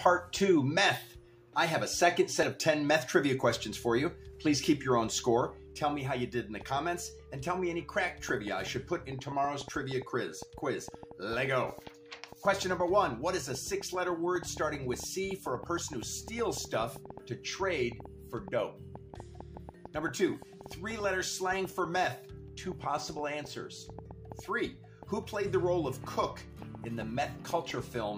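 From 6.61 s to 28.12 s, a train of clicks ticks over the sound at about five per second, unevenly spaced, roughly a hundred in all, peaking about 5 dB above the signal. Unlike random crackle, every click has the same shape, likely from interference by nearby equipment.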